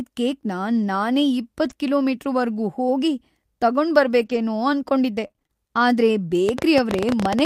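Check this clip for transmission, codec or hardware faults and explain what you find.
Four faults are present, of three kinds.

At 1.65–1.71 s and 4.21–4.39 s, lost packets were rebuilt from error correction: low-bitrate backup copies fill the holes, so the audio turns briefly rough and noisy but never drops out.

From 5.27 to 5.51 s, repeated packet loss leaves six short holes patched by stretching earlier sound. The result is choppy and robotic. Unlike the rebuilt packets, real content is missing here.

From 6.49 s to the end, a train of clicks ticks at about 16 per second, irregularly spaced and clearly louder than the speech. It is likely caused by interference or a faulty connection or power supply.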